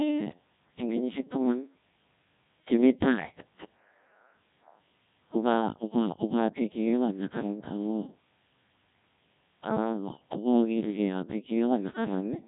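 The speech has been passed through the Codec 2 vocoder at heavy damage, and the sound fits a very low bitrate of about 1.6 kbit/s. Only pitch, voicing, energy and envelope survive, so the decoder rebuilds the voice from sine waves, making it robotic and buzzy, with nothing above 3.8 kHz.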